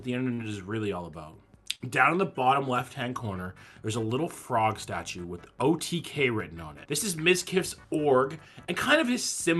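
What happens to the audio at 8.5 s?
Nothing goes wrong at 8.5 s: the audio carries on intact through that moment, with only the ordinary character of the WebRTC call path and its Opus coding, whose band limit sits at about 12 kHz.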